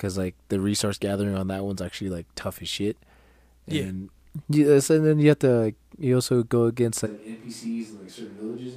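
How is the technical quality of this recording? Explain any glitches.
The recording has one clear fault near the end.

Switch to a distant microphone, from 7.08 s to the end, right after "you also go against": the speech abruptly turns roomy and thin, drops roughly 10 dB, and carries room noise about 25 dB below it. The likely cause is the close microphone dropping out, leaving a farther pickup that hears more of the room.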